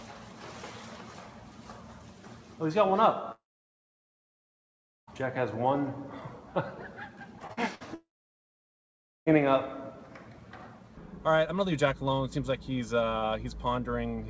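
Long network dropout, 3.32 to 5.09 s: the sound stops and about 1.67 s of that stretch is silent, with only a brief fading continuation of the last sound before it. When the audio returns, about 1.76 s of material is gone, most likely because the network stopped delivering packets for that long.

Short concealed packet loss, 7.47 to 7.51 s and 7.53 to 7.59 s: the decoder lacked about 20 ms and then 40 ms of audio and filled each hole by extending the preceding sound before blending back, so both moments come across as a quick smear or wobble.

Burst of packet loss, 7.75 to 7.82 s: about 60 ms never arrived in time. The receiver carried the last sound forward and turned it down across the gap, giving a held, fading tail, and the audio picks up later with that piece missing.

Long network dropout, 7.94 to 9.28 s: a second outage follows almost immediately, with about 1.21 s of silence and about 1.32 s of audio lost before playback resumes, likely from another break in delivery. 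Throughout the clip nothing is heard above 8 kHz, which fits a G.722 call path at 64 kbps.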